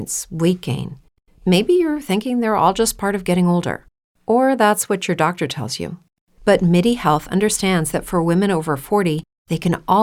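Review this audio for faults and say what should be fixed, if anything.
Nothing to fix: no faults are audible anywhere in the speech.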